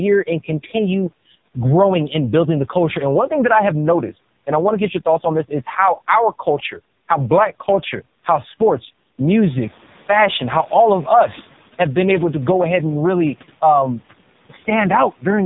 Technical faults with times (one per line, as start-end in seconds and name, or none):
0.00-15.46 AMR narrowband mobile codec